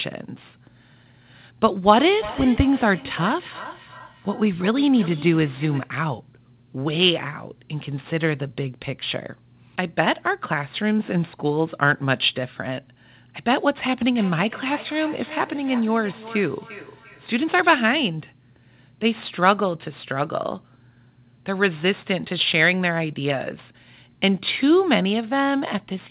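Sample clock jitter runs through the whole speech clip: the converter's clock wavers by a few microseconds, so samples land slightly off time. The resulting error sits roughly 25 dB below the signal, a roughness that swells on loud, bright syllables and vanishes in pauses. On a spectrogram it shows as a faint noise haze that appears only under active speech and reaches up to the 4 kHz ceiling of the call band.

Feedback echo between two devices appears from 2.0 to 5.96 s and again from 14.16 to 17.98 s. A second device on the same call replays what it receives, and the other microphone picks it up again, which that device's echo canceller cannot remove. Each phrase comes back roughly every 400 ms, at about 15 dB below the speech in the first stretch and about 17 dB below in the second, thinner and more ringing with each pass. The waveform shows decaying copies of each burst spaced evenly along the time axis, and the spectrogram shows repeated, progressively fainter ghosts of the speech pattern.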